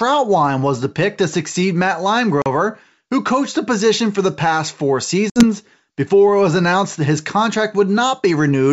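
At 2.42 s, then again from 5.30 to 5.44 s right after "for the past four" and before "before it was announced", there's packet loss on an ADPCM call. Around 40 ms and then 60 ms go missing, a couple of packets and then about three, and each gap drops to hard-edged silence. Since the decoder's predictor and step size lose track of the sender's, the sound comes back with a bit of grit before settling.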